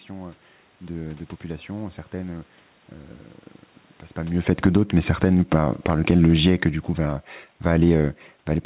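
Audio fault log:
4.36 to 8.65 s, automatic gain falling: shortly after the talker moved at about 4 s, the gain control judged the input too loud and gradually cut its gain by about 8 dB, so the speech and the room noise sink together through to the end.
4.73 to 6.92 s, automatic gain rising: during that decline the gain control briefly judged the input too quiet and pushed its gain up by about 4 dB over roughly two seconds, so voice and background swell together before the downward drift takes over again.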